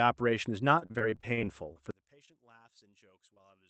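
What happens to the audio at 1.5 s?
At 1.5 s the speech is caught in repeated packet loss (robotic sound), running from 0.79 to 1.77 s. Twelve gaps, the longest 39 ms, are patched by stretching the last sound, giving choppy speech with pieces missing. A spectrogram shows smeared, repeated frames broken by abrupt blank slivers.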